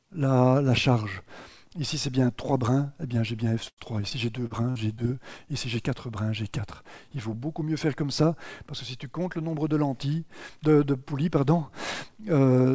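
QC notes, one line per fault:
3.68–5.03 s, repeated packet loss (robotic sound): seven holes, the longest 94 ms, are filled by extending the preceding sound, so about a sixth of this span turns choppy. Unlike a single dropout, the patched gaps recur in quick succession.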